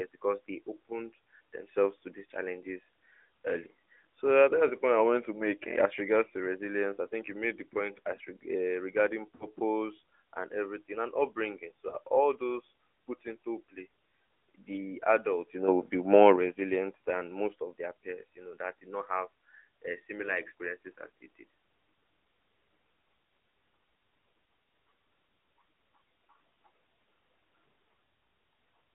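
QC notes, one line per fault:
Throughout, AMR narrowband mobile codec: the speech passed through AMR-NB at about 10.2 kbps on a 300 to 3500 Hz line, so nothing above roughly 3.5 kHz survives and the low end is thinned, while the pulse-driven vocal tract model leaves a plainly audible buzzy, synthetic edge on the voice.
9.36 to 9.47 s and 11.90 to 11.96 s, lost AMR speech frames: corrupted frames were replaced by the decoder repeating the last good pitch and tract settings at falling gain. The 40 ms gap at 9.36 s smears and dips, and the 20 ms one between "and everything and upbringing" and "all those put into" gives a brief warble.
15.68 to 16.36 s, sudden gain jump: a level setting was applied with no ramp, likely a digital gain or bit-shift change, so voice and background step up together by about 6 dB after "the adults you" and hold there until "resilient than most of".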